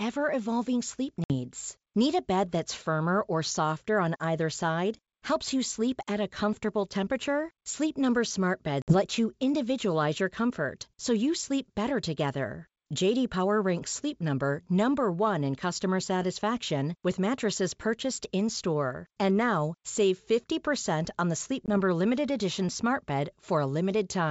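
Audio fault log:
1.24–1.32 s, 8.82–8.94 s, 21.66–21.69 s: packet loss on an ADPCM call. Abrupt silent gaps replace each dropout, then the speech returns slightly distorted while the decoder's predictor and step size resynchronise.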